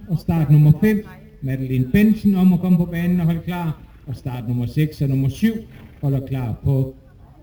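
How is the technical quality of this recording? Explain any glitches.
The recording has one fault, present throughout: imaging from sample-and-hold upsampling. The audio was raised from a rate that fits 16 kHz by holding each sample unsmoothed, so a mirrored copy fills 8 to 16 kHz at about 31 dB down. It is heard as a faint metallic fizz tracking the sound's level.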